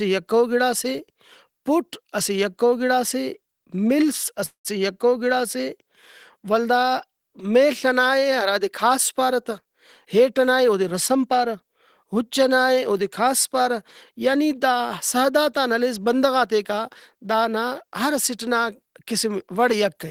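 At 4.45 s the speech stalls for about a third of a second, until 4.79 s: the last sound hangs on as a fading buzz, drops to silence, then picks up exactly where it stopped. That's a call audio freeze, likely from delayed packets draining the jitter buffer.

From 9.61 to 11.56 s, after "کھاس پارہ تہ" and leading into "اُچ ئنائے اودے کھاس", the speech sounds hurried at about 110% speed with unchanged pitch. That's a jitter buffer speed-up, trimming roughly a fifth of a second of tiny pitch-period slices to cut the backlog.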